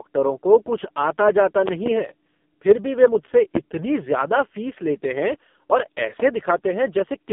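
Throughout, the speech carries AMR narrowband mobile codec damage. Nothing passes above about 3.6 kHz or below 200 Hz. The vocal-tract model is starved of pulses, so the voice turns buzzy and synthetic. That heavy damage points to a very low bitrate, near 5 kbps.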